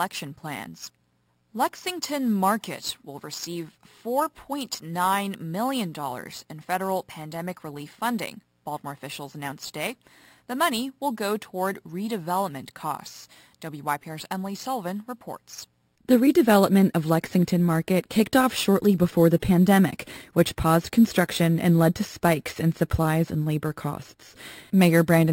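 Speech, with imaging from sample-and-hold upsampling throughout. A bright metallic fizz sits between 6 and 12 kHz, about 20 dB below the voice, tracking its loudness. Each sample was simply repeated without smoothing. That fits audio originally at 12 kHz, raised to 44.1 kHz.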